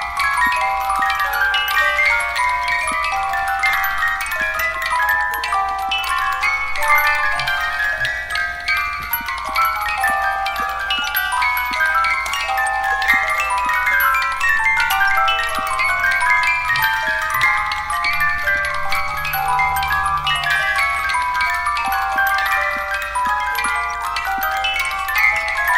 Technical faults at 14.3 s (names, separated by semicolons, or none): none